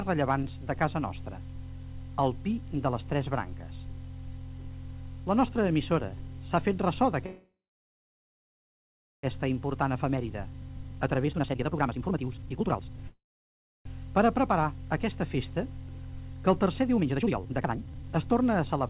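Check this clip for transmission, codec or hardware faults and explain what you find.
Two kinds of transmission fault are present. Throughout, nothing reaches above 4 kHz, which fits a narrowband call codec such as G.711 at 64 kbps.

Call audio freeze, 7.26 to 9.25 s and 13.08 to 13.87 s. The last bit of sound is stretched into a short fading buzz, then silence of about 1.7 s in the first freeze and 0.68 s in the second. This is likely packets stalling so the jitter buffer empties. The receiver fills the wait and then resumes where it stopped, so nothing is lost, but the audio now runs about 2 s and then 0.78 s later.

Jitter buffer speed-up, 9.75 to 13.04 s and 16.97 to 18.84 s. The sound rushes at about 151% and 153% of normal speed with its pitch unchanged. The backlog of late packets arrives together, and the receiver trims repeated pitch-period-sized slices to shed the excess delay. 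Roughly 1.5 s is cut in the first stretch and about 1 s in the second, which makes the audio sound hurried.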